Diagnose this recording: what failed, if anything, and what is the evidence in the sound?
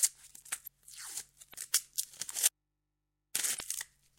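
Codec stage: damaged data in a compressed stream at 1.50–1.55 s and 3.57–3.61 s. Corrupted frames make the decoder misread them and lose sync, briefly disturbing the sound.

Audio dropout to a faint residue from 2.47 to 3.35 s: the sound cuts abruptly for 0.88 s, leaving mains hum about 50 dB down. This is likely a broken analogue connection, with the downstream input left live and open.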